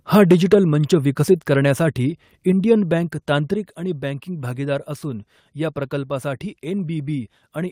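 At 2.52 s and again at 3.54 s, just before "आणि बँकिंग भागीदार असून", the speech and background drop abruptly by about 4 dB each time. This is a microphone volume step-down, likely the call software lowering input gain. The waveform envelope shrinks in two sudden steps, and the spectrogram darkens evenly across all frequencies.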